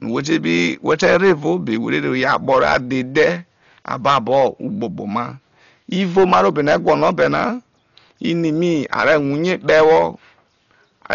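Throughout, the speech is dull and carries a rough, fluttering noise, with nothing above 7 kHz. This heavy damage is likely from Dolby Digital compression at a low bitrate, fitting about 40 kbps. A spectrogram shows a flat ceiling at 7 kHz with speckled noise filling the band below it.

Hard clipping appears at 0.32–2.77 s, 3.16–3.30 s, 3.91–4.45 s, 6.17–7.47 s, 8.93–9.16 s, 9.52–10.04 s and 11.11–11.15 s, overdriven by about 8 to 10 dB. The peaks are sheared off flat and sound harsh and fuzzy. The waveform shows squared-off tops, and the spectrogram shows bright vertical harmonic smears.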